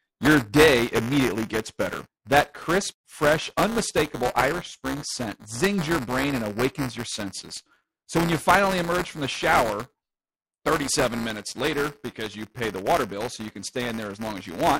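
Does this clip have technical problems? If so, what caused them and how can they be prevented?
Yes, there's buffer tearing through the whole speech clip: a steady robotic buzz at 200 Hz that rides on the signal. The writer and reader of the ring buffer have slipped, so in each 5 ms period a small slice, under a tenth, replays audio from about 10 ms earlier, with hard joins on both sides. Keep the write pointer locked a safe margin ahead of the hardware read position, and resynchronise on underruns.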